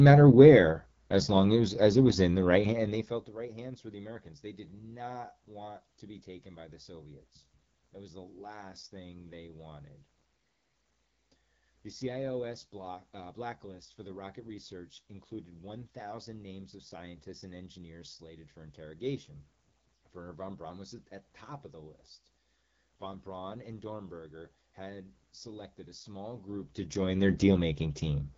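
From start to finish the speech runs through the AMR wideband (HD Voice) codec, and the damage is easy to hear. Nothing reaches above 7.5 kHz. The codec models the voice up to 6.4 kHz from a pulse-excited vocal tract and fills the top band with shaped noise. The coarse, synthetic texture points to one of the lower rates, which fits about 8.85 kbit/s.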